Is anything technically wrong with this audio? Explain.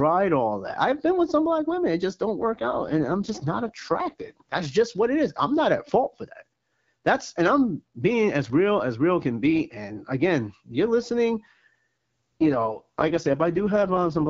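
Yes. Twice, from 2.38 to 4.72 s (after "women it just don't", ending just before "what it is I'm") and from 12.41 s to the end, there is an AMR rate drop. The codec is pushed down to a lower mode to free bits for error protection, which fits a fall from about 12.65 to 6.6 kbit/s. The bandwidth and continuity hold, but the speech turns rough, raspy and synthetic, then recovers after the first drop.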